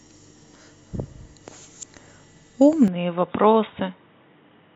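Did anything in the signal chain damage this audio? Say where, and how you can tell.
Yes. At the driver and device stage, the input was likely switched to a poorer device at 2.88 s, with no silence at the switch. From there to the end the speech turns dull and boxy, with nothing above 3.8 kHz, drops about 5 dB, and sits over a new, faint noise floor.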